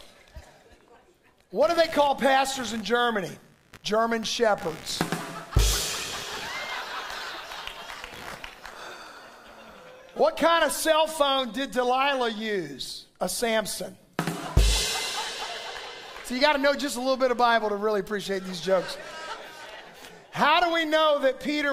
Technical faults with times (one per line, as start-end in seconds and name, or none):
1.61-8.68 computer activity noise